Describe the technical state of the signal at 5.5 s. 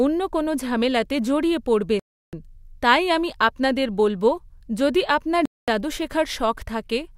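At 5.5 s the speech cuts out to complete silence, a 224 ms gap from 5.46 to 5.68 s before sound returns. This is a Bluetooth stall, likely from interference delaying packets until the headphones' buffer emptied and playback paused for retransmitted data.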